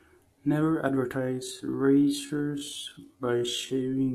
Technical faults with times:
1.15-4.14 time-stretched section

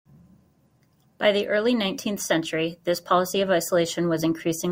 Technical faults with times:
none

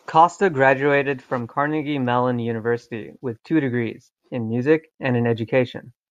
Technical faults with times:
none

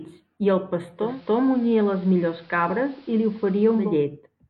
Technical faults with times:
0.95-3.96 digital radio blending to analogue

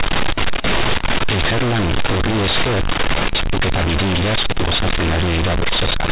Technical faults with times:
0.00-6.11 companded audio read as linear

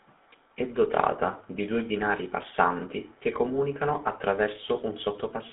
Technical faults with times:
0.00-5.52 GSM full-rate codec

